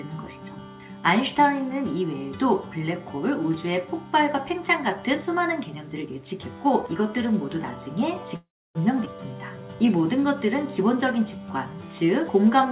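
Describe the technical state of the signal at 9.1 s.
A skip ahead at 9.05–9.08 s: about a tenth of a second of audio was discarded, so playback jumps forward, joined across a brief 8 ms fill.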